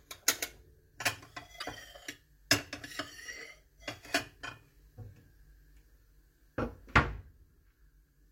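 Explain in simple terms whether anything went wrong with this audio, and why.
Around 1.56 to 1.64 seconds, part of the compressed file was corrupted: damaged data in a compressed stream. The player couldn't read those bytes, lost its place, and hunted for the next readable chunk, so you hear a brief chirp or blip there.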